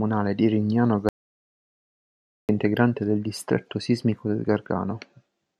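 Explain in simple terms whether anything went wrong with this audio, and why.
The input signal was likely cut off for about 1.4 seconds. That caused an audio dropout to silence: from 1.09 to 2.49 s the speech vanishes into dead silence, resuming at "integrante del distretto sismico".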